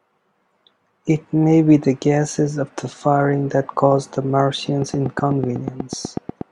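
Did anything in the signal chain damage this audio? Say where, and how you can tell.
Yes. A train of clicks runs from 4.82 to 6.42 s: around fifteen near-identical pulses at a regular 8.2 per second, peaking about 10 dB above the speech and ticking through pauses too. That independence from the signal points to likely interference in the analogue wiring rather than codec damage.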